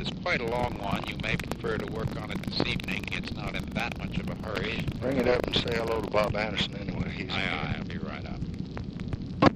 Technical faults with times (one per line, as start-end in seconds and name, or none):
0.44-6.28 buffer tearing